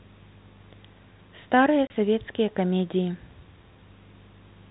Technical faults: packet loss filled with silence

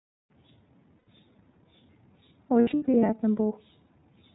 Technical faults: iLBC codec; lost iLBC frames

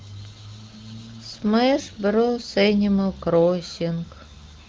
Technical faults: none

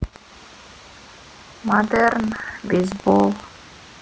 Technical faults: buffer tearing

